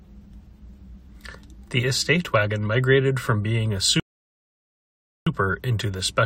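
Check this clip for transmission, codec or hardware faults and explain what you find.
One transmission fault is present, a rebuffering stall. At 4.00 s, right after "migrated from being a", the speech cuts to silence until 5.27 s, then resumes exactly where it stopped. The player ran out of downloaded audio and waited for more, so nothing is lost but about 1.27 s is added. On a waveform it appears as a flat line, and on a spectrogram as a blank vertical band.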